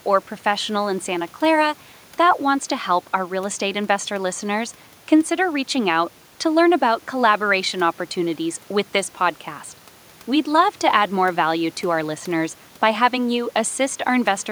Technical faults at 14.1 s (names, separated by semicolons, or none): none